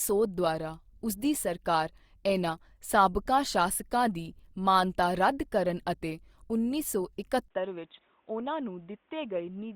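At 7.48 s the speech cuts out for about 20 ms, then comes back duller, roughly 5 dB quieter, nothing above 3.8 kHz, and with a faint new noise floor well below it. That points to the input likely being switched to a poorer device, through to the end.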